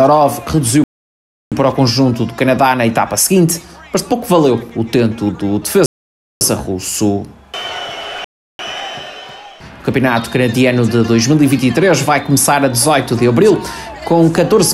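The sound drops to dead silence three times, at 0.84 s for about 0.68 s, at 5.86 s for about 0.55 s, and at 8.24 s for about 0.35 s. Each is likely a Bluetooth stall, where interference delayed packets until the headphones' buffer emptied and playback halted.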